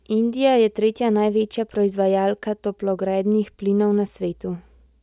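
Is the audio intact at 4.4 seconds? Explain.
Yes, the audio is intact at 4.4 seconds, with no dropout, click, distortion or other fault at that moment.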